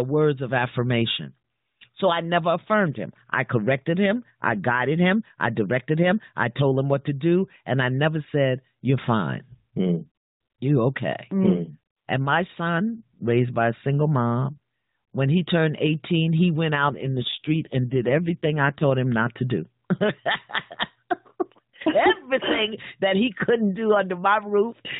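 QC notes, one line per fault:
16.74–18.87 s, AMR rate drop: just after "he went" and lasting until "him not to do", the speech turns rougher, buzzier and more synthetic, with no gap and no change in bandwidth. Fewer pulses per subframe are left to drive the vocal tract model, which fits the codec falling from 12.2 to 5.9 kbps, likely because a weak radio link shifted bits to error protection. The narrowband 4 kHz ceiling stays unchanged through the drop.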